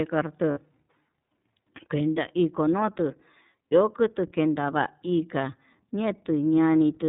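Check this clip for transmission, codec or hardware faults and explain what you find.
Two faults are present: iLBC codec coding throughout, and lost iLBC frames once.

Across the whole clip the speech carries the iLBC codec's narrowband character. Nothing above 4 kHz survives, and the excitation coding is plainly audible as a rough, slightly synthetic edge. The 30 ms frames and 13.33 kbps rate point to iLBC's 30 ms mode.

From 0.51 to 0.59 s, lost iLBC frames leave a gap of about 60 ms, which fits two missing 30 ms frames. The decoder filled it by repeating the last pitch cycle blended with noise, so the gap sounds like a brief held, buzzy vowel. Because each frame decodes independently, the voice recovers immediately after.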